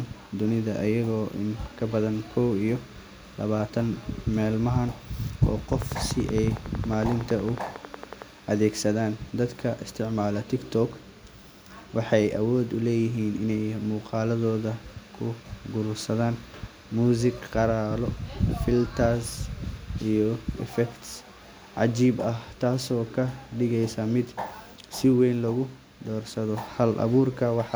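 A train of clicks runs from 5.73 to 8.23 s: around thirty near-identical pulses at a steady 10.8 per second, peaking a few dB above the speech. The likely cause is electrical interference or a faltering interface, heard as regular ticking, pauses included.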